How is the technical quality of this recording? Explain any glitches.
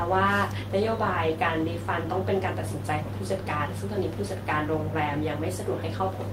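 The technical quality of the recording is sound, with no glitches to explain.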